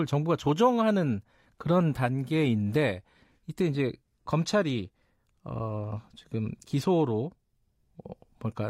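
No audible technical fault disturbs the speech signal at any point in the recording.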